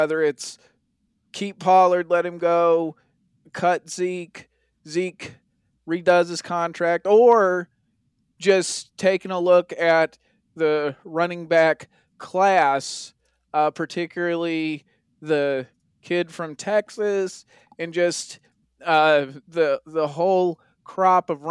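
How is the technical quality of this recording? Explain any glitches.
No glitches can be heard anywhere in this speech recording. There is nothing in it that calls for an explanation.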